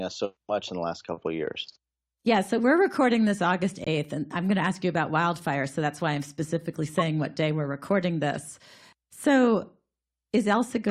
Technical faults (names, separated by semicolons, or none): corrupt frame muted; corrupt frame decoded